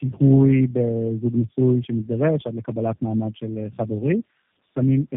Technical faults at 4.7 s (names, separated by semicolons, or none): tandem speech coding